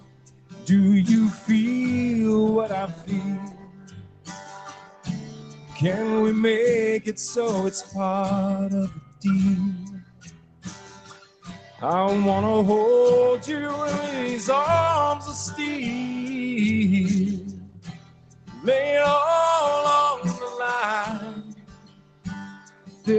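A speech-tuned noise suppressor was left running on non-speech sound, so it keeps treating held and fading parts as noise and swinging level by roughly 15 dB, giving a pumping, thinned-out feel. You can hear the suppressor cutting sound hardest at 0.0–0.69 s, 2.87–3.12 s, 3.36–5.81 s, 8.88–9.25 s, 9.76–11.83 s, 17.39–18.67 s and 21.13–23.08 s, with drops of about 11 to 17 dB, where sustained material and tails sink away. The top end stopping around 8 kHz, plus the codec texture, fits the Opus call path, which is normal here.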